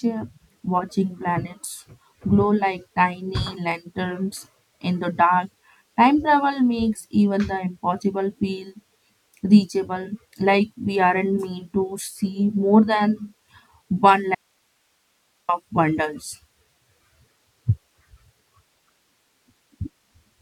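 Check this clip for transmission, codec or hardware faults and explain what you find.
One fault: an audio dropout to a faint residue from 14.35 to 15.49 s. The link likely lost the incoming signal for about 1.1 s while the downstream path stayed live, so the speech cuts off abruptly and only hiss, roughly 45 dB down, fills the gap.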